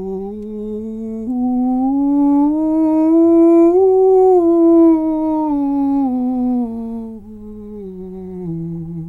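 No technical faults can be heard anywhere in this music recording. Nothing interrupts or disturbs the sound at any point.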